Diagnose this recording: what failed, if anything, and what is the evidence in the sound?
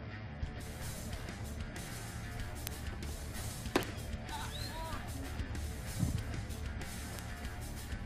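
Frames out of order, network or storage stage: at 1.78–1.97 s and 4.31–4.41 s, adjacent blocks of about 93 ms and 46 ms play swapped, giving a garbled flutter without lost time.

Bit error spike, digital link or memory: single sharp broadband ticks at 2.67, 3.83, 6.19 and 7.19 s, where one flipped bit throws a sample value by a power of two (two samples in a row at 7.19 s).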